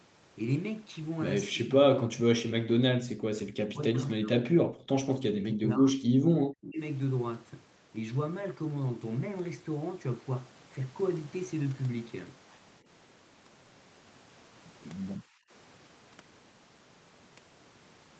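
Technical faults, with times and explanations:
1.53–1.94 s, 2.14–3.34 s, 3.53–5.07 s, 5.27–6.81 s and 15.18–15.43 s, speech suppressed in double talk: the talker sinks by roughly 20 to 40 dB in uneven pieces, likely because an echo canceller treated it as echo while the far side talked. Unlike packet-loss dropouts, the affected stretches add up to roughly 0.2 to 1.5 s each.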